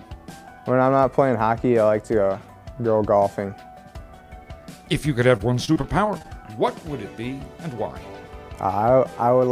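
The audio breaks up between 5.37 and 6.26 s with repeated packet loss, giving it a choppy sound. There seem to be around seven short dropouts, none longer than about 22 ms. The receiver papers over each one by stretching the last bit of sound, so roughly 14 percent of that stretch is patched-in repetition rather than real audio. That repetition is where the choppy character comes from.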